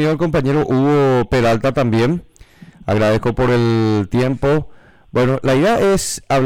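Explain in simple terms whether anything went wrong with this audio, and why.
No faults can be heard.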